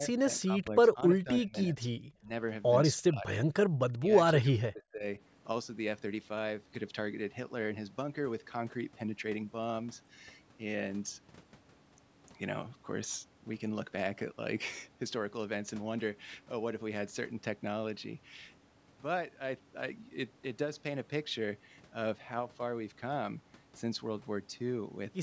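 The speech dips and breaks into fragments during the first five seconds, at 0.0 to 2.31 s, 3.02 to 3.26 s, 3.43 to 3.48 s, 3.92 to 4.09 s and 4.43 to 5.05 s. The level falls by roughly 20 to 30 dB in the first three stretches and by around 40 dB in the last two, almost muting the talker. This is likely speech suppressed in double talk: both sides spoke at once, and the echo canceller could not tell this voice from loudspeaker echo, so it turned both down.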